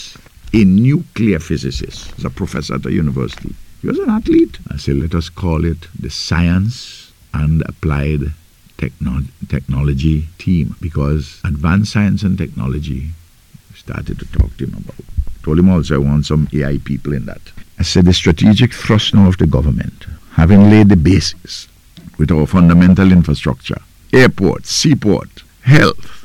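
No technical faults can be heard at any point in the audio.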